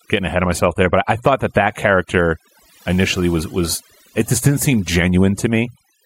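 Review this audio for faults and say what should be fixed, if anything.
The background drops and breaks up into twinkling specks across the whole clip. That is overdone noise removal: the reduction is set so hard that bands near the noise estimate are cut away, taking quiet speech detail with them. Use gentler reduction settings and audition the result before committing.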